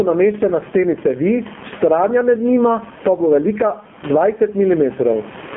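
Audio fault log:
throughout, gain pumping: A fast limiter, likely fed from overly high input gain, pulls the level down by around 20 dB on loud syllables.
throughout, AMR narrowband mobile codec: Speech passes through a narrowband mobile speech codec; nothing above 3.6 kHz survives, and the heavy buzzy, synthetic texture fits a low AMR-NB mode near 5.9 kbps.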